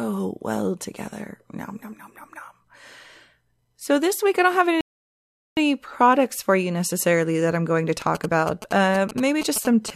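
At 4.81 s the player runs out of downloaded audio and halts in a rebuffering stall: the speech drops to silence until 5.57 s, then picks up exactly where it left off, so nothing is lost but about 0.76 s of dead air is inserted. From 8.02 s to 9.90 s a nearby 2G phone sending signalling traffic couples into the circuit, which rectifies its radio bursts into GSM signalling bursts, a galloping dit-dit-dit of short buzzes at 217 Hz, sitting roughly 10 dB below the speech.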